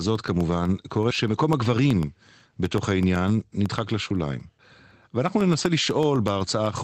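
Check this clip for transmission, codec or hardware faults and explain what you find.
One hardware fault is present: periodic USB or driver dropouts from 0.16 s to 6.78 s. Every 0.125 s, something stalls the USB bus or audio driver, and about half a millisecond of sound becomes silence. The result is a steady eight-per-second ticking through the speech. Its strict clockwork spacing sets it apart from network packet loss or random clicks, which fall irregularly. The call codec's band limit near 8 kHz can also be heard.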